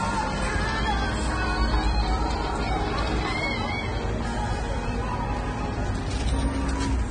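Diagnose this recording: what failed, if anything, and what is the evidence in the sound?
Across the whole recording the top end is missing, with nothing above about 9.7 kHz, and the artefacts of heavy lossy coding persist even though the stored file is a generous MP3. This is a codec-stage fault, likely low-bitrate audio saved at a high bitrate: an earlier encoder, consistent with a pass near 24 kbit/s, had already discarded the high band and fine detail, and re-encoding at around 192 kbit/s kept that damage without restoring anything.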